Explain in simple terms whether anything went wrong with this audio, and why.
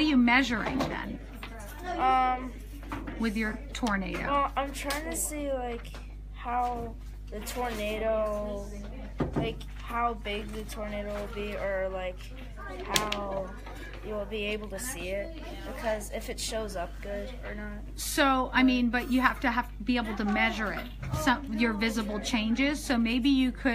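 Yes, something went wrong: there is mains hum running underneath the sound from the very start to the very end. It is a steady low drone at 50 Hz, quite loud compared with the sound itself. It happens when the recording gear picks up electricity from the power line, often through a ground loop or a nearby transformer. Unlike hiss, which is a high, airy rush, hum is a fixed, deep tone that never changes pitch.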